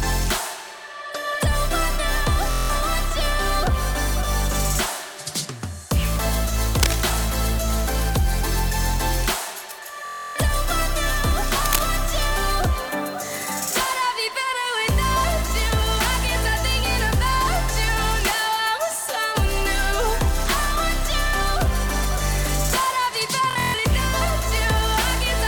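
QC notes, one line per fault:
2.51–2.70 s, Bluetooth stutter: about 186 ms of audio drops out while a short slice repeats as a buzzing stutter, then the sound resumes further on, as if it had kept playing. The gap fits roughly 8 lost packets.
10.05–10.36 s, Bluetooth stutter: the longest stutter, about 302 ms lost, which fits roughly 13 packets.
23.51–23.79 s, Bluetooth stutter: about 209 ms lost in broken runs spread over 279 ms. The longest run is 139 ms.
6.80–6.95 s, cable scratch noise: a burst of dense, uneven rustling at about the signal's own level, likely from a worn cable, connector or control whose contact resistance jumped as it moved.
11.66–11.85 s, cable scratch noise: a similar scratching burst, about 5 dB below the signal.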